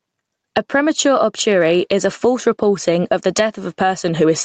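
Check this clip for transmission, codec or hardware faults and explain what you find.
One fault, running through the whole speech clip: gain pumping. The gain swings by roughly 15 dB under each loud syllable, likely because the gain sits too high and a fast limiter keeps clamping it, which leaves everything squashed. The call path's 8 kHz top end is just the codec's normal bandwidth.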